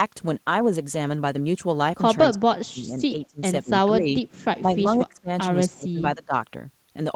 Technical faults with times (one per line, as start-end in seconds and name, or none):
2.31-4.16 speech suppressed in double talk
4.61-5.30 speech suppressed in double talk
5.70-6.34 speech suppressed in double talk